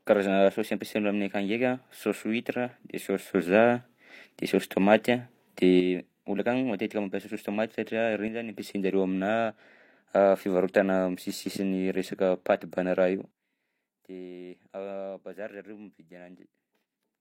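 At 3.33 s the speech and its background noise leap up by about 6 dB together, then fall back at 5.80 s, just before "olo akany". After "mampiasa saosy tômaty satria", a brief dip of about 6 dB runs from 8.28 to 8.53 s. From 13.31 s to the end, everything drops by about 17 dB. Each step is instant, with no fade, the mark of a sudden gain jump, likely a gain setting applied without a ramp.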